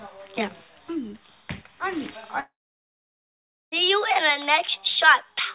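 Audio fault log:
2.40-3.74 s, long network dropout: sound trails into a fading buzz or hiss, then about 1.2 s of silence, resuming with that stretch missing; likely a network outage.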